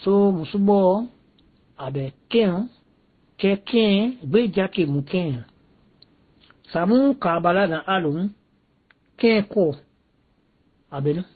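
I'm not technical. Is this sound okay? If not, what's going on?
No, the speech sounds dull and smeary throughout, with nothing above about 4.5 kHz. That's likely transcoding between lossy codecs, each squeeze adding its own damage.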